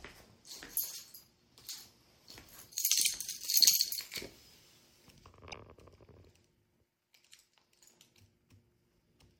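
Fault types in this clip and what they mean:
Repeated frames: a brief stutter at 3.04 s and 5.51 s, where a 48 ms slice of sound plays twice in a row. The length suggests a pair of compressed frames written twice, each repeat lengthening the audio by 48 ms.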